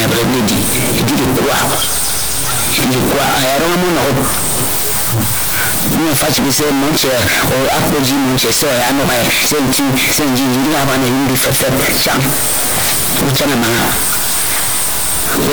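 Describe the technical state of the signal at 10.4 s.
At 10.4 s the speech is harsh, blaring and far too loud, with the waveform pushed into a near-square shape at an almost fixed, high level and background noise as loud as the talker, though pitch can still be followed. The fault runs through the whole clip. It is likely a float read as integer: samples stored as 32-bit float have been interpreted as 32-bit integers, so sign and exponent bits dominate each value.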